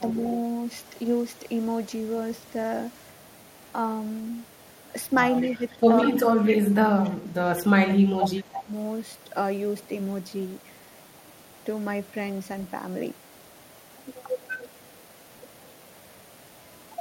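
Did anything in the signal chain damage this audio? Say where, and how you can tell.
Yes. Echo leak, in call processing: a copy of the speech trails 185 ms behind, about 20 dB down at 0.16–1.38 s and about 30 dB down from 2.46 s onward. This is likely loudspeaker pickup the canceller left in.

Speech suppressed in double talk, also call processing: between 5.52 and 8.7 s the speech dips in pieces by up to about 20 dB, roughly 1.5 s in total. This is likely the canceller attenuating its own talker along with the echo during overlapping talk.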